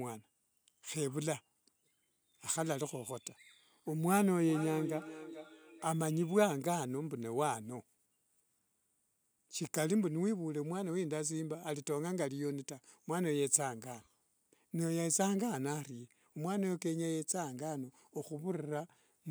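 Speech recording with a feedback echo between two devices from 4.41 s to 5.99 s. The sound comes back at a fixed interval of roughly 0.4 s, with the loudest return at about -10 dB relative to the speech, and each pass gets thinner and more ringing. The cause is two devices in the same room on one call: one plays what the other's microphone sent, that microphone picks it up again, and neither echo canceller removes sound played by the other device.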